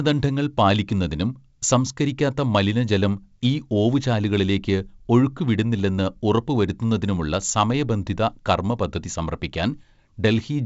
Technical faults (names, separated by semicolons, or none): none